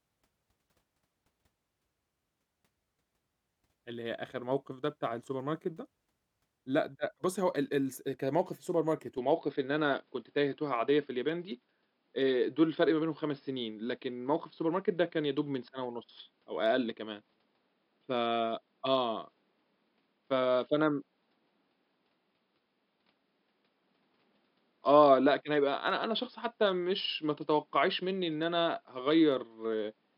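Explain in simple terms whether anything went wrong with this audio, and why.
Something does change at 9.18 s: the sound suddenly turns duller, with nothing above about 5.2 kHz, the level shifts and a faint new background noise appears. That's likely the input switched to a poorer device, and it stays that way to the end.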